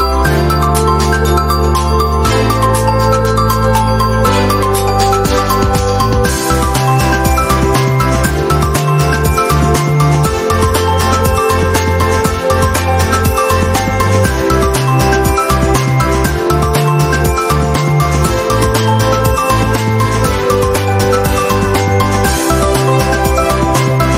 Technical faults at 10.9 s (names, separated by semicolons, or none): gain pumping